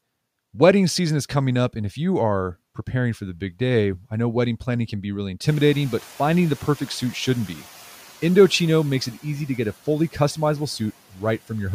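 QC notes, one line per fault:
5.47–7.63 s, noise suppressor catching up: room noise jumps about 23 dB near 5.5 s; suppression lags, noise floor visibly raised on spectrogram, then sinks about 5 dB over 2.16 s.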